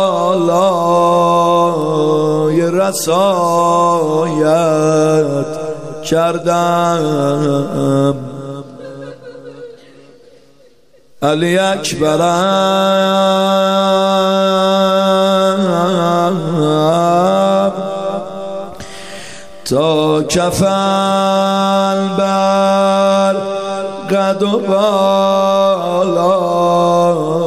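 The audio carries two bit error spikes, at 1.82 s and 11.52 s. Each is a single corrupted sample, one flipped bit that jumps the value and snaps back. Both are heard as a sharp broadband tick unrelated to the sound. The second tick is about 6 dB louder.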